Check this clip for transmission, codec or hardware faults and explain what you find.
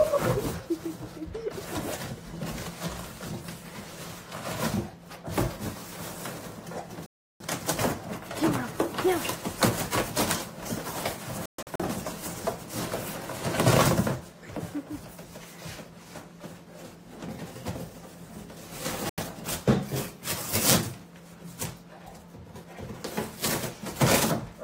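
Three digital broadcast dropouts break the sound. The first, from 7.06 to 7.45 s, is one clean silence of about 340 ms. The second, from 11.46 to 11.84 s, is several short holes totalling about 210 ms, the longest 128 ms. The third is a brief gap from 19.09 to 19.23 s. Each time, the receiver lost the signal or rejected corrupted frames and muted until valid data returned, so the audio sent during those moments is gone.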